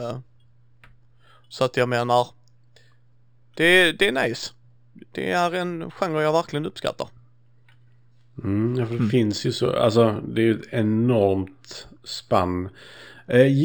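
Throughout the speech there is imaging from linear upsampling: sound band-limited near 6 kHz, which fits a 12 kHz source raised to 44.1 kHz, was interpolated with straight lines. The top is dulled, and a mirrored copy around 25 dB down sits between 6 and 12 kHz, adding faint metallic shimmer on sibilants. Unlike aliasing, nothing folds into lower frequencies.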